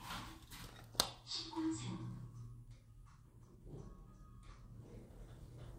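Nothing stood out as a technical fault on listening to this sound recording.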